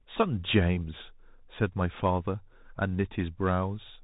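From start to finish, the speech carries Bluetooth CVSD headset codec damage: nothing above about 3.8 kHz, scratchy s sounds, and a grainy hiss from the one-bit delta coding, which fits a 64 kbps link.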